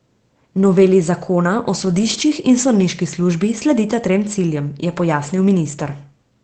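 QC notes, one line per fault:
1.81–2.23 s, lost packet rebuilt from error correction: across this stretch, about 220 ms of the sound turns rougher and grainier but never drops out. The pattern points to a run of separate lost packets, each recovered from the low-bitrate backup copy that Opus in-band forward error correction tucks into the following packet. The decoder plays those coarser copies in place of the originals, so continuity holds while detail and cleanliness fall away, against the Opus call path's 8 kHz-wide sound.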